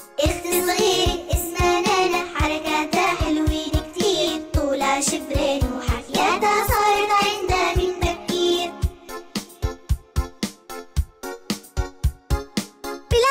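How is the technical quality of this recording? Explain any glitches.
The recording has one clear glitch, a call bitrate drop from 5.93 s to 8.85 s. The sound turns coarse and muffled for that stretch and then recovers. The change fits the encoder being cut from around 96 kbps to about 15 kbps, holding the low rate for roughly 2.9 s. The call's bandwidth estimate fell, so the encoder had far fewer bits to spend. It coded the audio more crudely and discarded the high frequencies, leaving a rough, dull tone.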